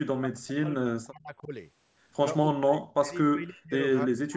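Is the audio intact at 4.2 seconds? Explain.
No. From 4.06 s to the end, the speech drops sharply. This is speech suppressed in double talk, likely an echo canceller turning down this side's voice along with the loudspeaker echo.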